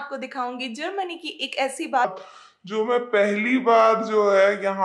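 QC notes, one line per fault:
2.05 s to end: section at the wrong speed, at 0.768x; pitch drops about five semitones as tempo slows, unlike a pure pitch shift, likely from a wrong clock.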